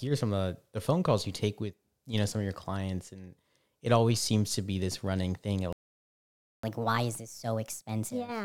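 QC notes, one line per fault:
5.73–6.63 s, playback stall. The speech cuts out mid-flow and the output falls silent for about 0.91 s. It then resumes. The likely cause is the player running out of data or its thread being blocked, so nothing reached the output until it recovered.
6.63–8.45 s, catch-up at higher speed. Right after the gap, the speech runs at 1.25 times normal speed to the end. Its pitch rises by roughly four semitones. The player resamples its backlog faster to win back lost time, so speed and pitch climb together.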